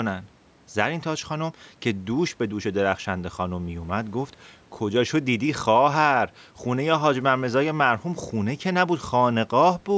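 The speech carries no audible technical faults.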